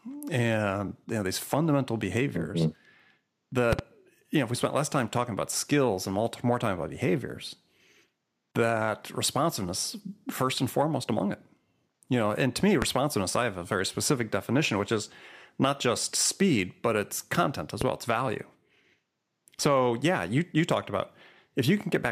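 Three loud pops cut through the speech. At 3.73 to 3.81 s there's a quick double pop just before "you know if we", at 12.82 to 12.85 s a single louder one between "know and to me" and "I have a very", and at 17.81 to 17.84 s another single hit right after "but it's content as". Each jumps about 15 to 20 dB above the speech, which carries on underneath. That's likely a voltage spike from a plug, switch or static discharge getting into the signal chain.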